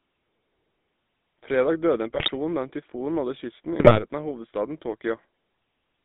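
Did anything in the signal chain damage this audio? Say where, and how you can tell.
Yes. The whole clip has a buzzy, gravelly roughness, with the band held between about 200 Hz and 3.6 kHz. That points to the codec stage, specifically the GSM full-rate codec, which fits a 13 kbps stream. It rebuilds speech from a vocal-tract filter driven by coarse, regularly spaced pulses, which produces the rasp.

At 2.14 to 2.31 s, just after "døde en", and again at 3.80 to 4.03 s, the speech squawks and gargles. These are GSM bit errors at the network stage. Corrupted bits reached the decoder and scrambled the filter, pitch and gain values for several consecutive frames.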